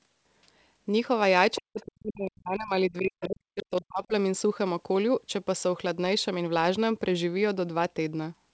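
An echo canceller that likely left residual echo lets the other side's voice leak through in faint, brief scraps at 1.55 s, 1.8 s and 3.21 s, each well below the talker. From 1.57 to 4.13 s, speech suppressed in double talk overlaps them, likely from the canceller mistaking the talker for echo, so the voice dips deeply or cuts out for about two seconds in total.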